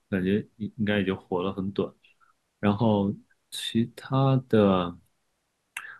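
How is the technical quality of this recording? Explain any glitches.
No audible glitches or faults.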